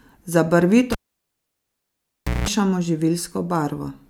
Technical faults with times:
0.92-2.48 cable pulled and plugged in

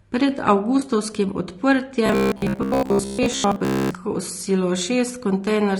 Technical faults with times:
0.00-5.80 low-delay AAC compression
0.79-0.83 AAC frame loss with concealment
2.06-3.94 robotic sound from repeated short buffers

